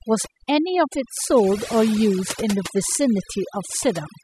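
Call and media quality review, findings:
Overdone noise removal, throughout. Background drops and breaks up into twinkling specks. Noise suppressor set too aggressive: bands near its noise estimate cut hard or muted, pulling low-level speech detail down with the noise.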